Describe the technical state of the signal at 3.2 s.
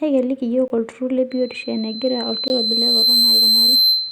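At 3.2 s a loudspeaker feedback squeal is sounding. It starts at 1.30 s, right after "yiok oltururr", and lasts to the end. The microphone hears its own loudspeaker, and the loop gain tops one at 4.1 kHz. That tone swells over about two seconds. It ends up roughly 10 dB above the speech.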